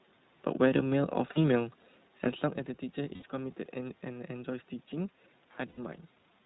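Throughout, the speech carries iLBC codec coloring: nothing above 4 kHz and a rough, slightly synthetic texture, consistent with iLBC's 15.2 kbps, 20 ms-frame mode. Lost iLBC frames occur at 1.28 to 1.44 s (80 ms scattered over 160 ms, longest run about 40 ms), at 3.14 to 3.23 s (80 ms), and at 5.68 to 5.79 s (100 ms). In each, the decoder repeats the last pitch cycle mixed with noise, giving a brief buzzy held vowel before clean speech resumes almost immediately.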